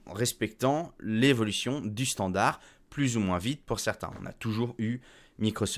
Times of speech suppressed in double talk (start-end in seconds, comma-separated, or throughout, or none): none